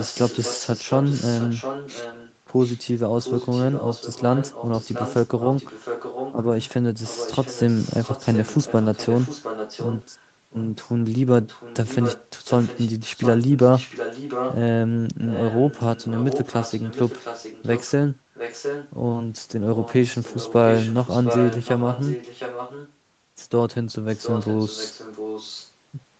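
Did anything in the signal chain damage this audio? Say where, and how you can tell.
Yes. A faint second copy of the speech trails the main talker by about 710 ms, roughly 10 dB quieter, during 0.0–2.8 s, 3.21–6.69 s, 7.03–10.93 s, 11.43–14.56 s, 15.25–17.92 s, 18.34–18.91 s, 19.75–22.93 s and 24.14–25.72 s. The steady lag and level point to an echo leak in the call processing stage, likely from a far-end loudspeaker whose echo canceller let its microphone pickup return down the line.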